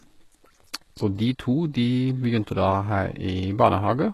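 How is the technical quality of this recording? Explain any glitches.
The recording has plainly audible codec damage across the whole speech clip, with no separate glitches at particular moments. From start to finish the treble sounds synthetic, and the likely cause is HE-AAC compression at a very low bitrate, around 16 kbps. The codec codes only the lower spectrum and rebuilds the highs by copying lower bands upward under a coarse envelope. The rebuilt harmonics don't line up with the real ones, so sibilants come out gritty, metallic or lispy, and nothing reaches above 12.3 kHz. A plain low-pass filter would sound dull instead. The highs here stay bright but false.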